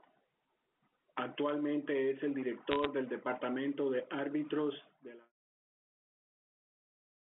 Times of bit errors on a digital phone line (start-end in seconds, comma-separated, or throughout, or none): 2.71-2.86